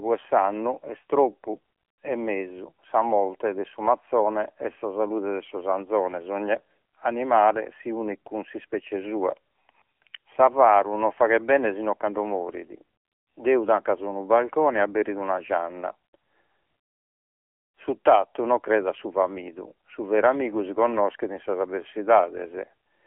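The speech runs throughout through an AMR narrowband mobile codec, confined to roughly the 300 Hz to 3.4 kHz telephone band with nothing above 4 kHz. The coarse pulse-driven vocal-tract model gives plainly audible buzzy, synthetic coloration, which fits a bitrate near 7.4 kbps.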